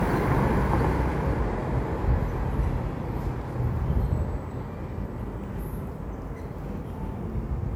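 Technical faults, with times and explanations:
Throughout, generation loss: the sound is swirly, smeared and hollow, and its attacks blur. This is likely from repeated lossy encoding, about five passes, which fits WMA 1 at 128 kbit/s. Each pass requantises on a shifted frame grid, so noise and spectral gaps build up.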